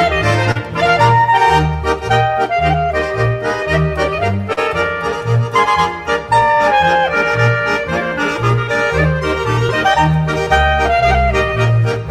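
Short concealed packet loss: stretches of about 40 ms at 0.51–0.57 s and 4.53–4.59 s, then about 20 ms at 9.67–9.71 s and 10.45–10.48 s, arrived too late to decode. The receiver extended the preceding sound across each hole, heard as brief smears or wobbles.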